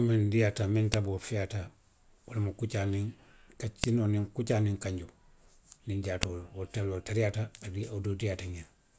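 File header played as audio at 0.94 s, just after "miŋ diiyaata miŋ", at 3.84 s, just before "kuccaa niŋ kanjoo", and at 6.23 s: each is a sharp, loud snap where joined speech pieces kept their WAV headers, whose bytes were reproduced as samples.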